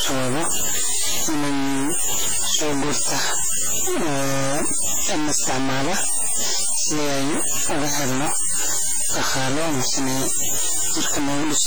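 A speech clip where the whole thing sounds coarse and gritty, with quiet stretches sputtering or dropping out. That's likely low bit depth without dither, truncated to something like 3 bits, with the error only about 10 dB under the signal. Over the whole clip there's also a washy, ringing smear with hiss that breathes along with the sound, likely heavy WMA compression at a low bitrate, around 24 kbps.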